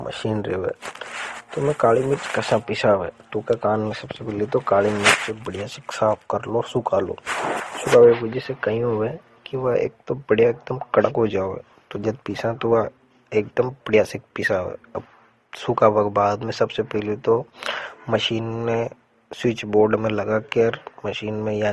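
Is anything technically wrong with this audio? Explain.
Yes. Throughout the speech, nothing is heard above 12.1 kHz, and two different flavours of compression grit are layered together. This is likely transcoding between lossy codecs: an MP3-style encode, then a lower-rate Opus encode that spent its bits re-coding the first codec's artefacts while adding its own, keeping the 12.1 kHz ceiling.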